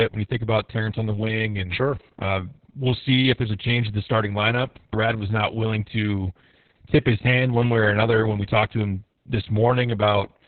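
Opus voice compression affects the whole clip, heavily. The speech was coded in narrowband SILK mode with nothing above 4.4 kHz, and coarse excitation coding, consistent with a bitrate near 6 kbps, leaves it muffled, hoarse and slightly robotic.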